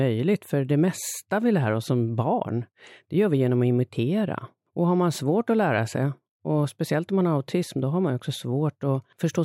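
No technical faults can be heard in the recording.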